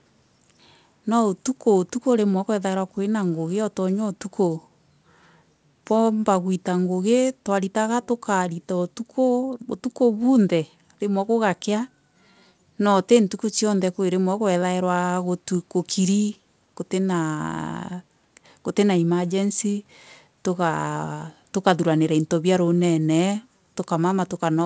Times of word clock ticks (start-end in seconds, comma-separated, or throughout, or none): none